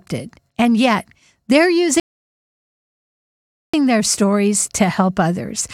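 A rebuffering stall runs from 2.00 to 3.74 s, right after "and yet they're". The player exhausted its downloaded audio and halted, so the speech drops to silence and then picks up exactly where it stopped at "their stories", with nothing missing but about 1.74 s added.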